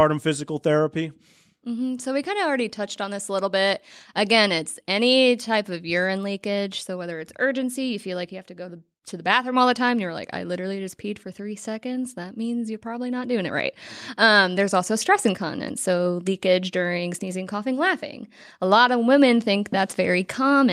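No technical faults are audible.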